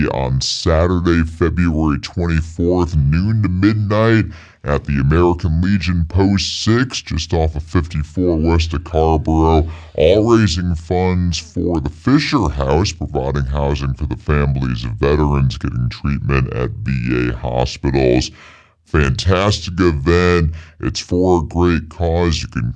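From start to end, a wrong sample rate slows everything to 0.69 times speed. Pitch drops 6.45 semitones. This fits 32 kHz audio played at 22 kHz.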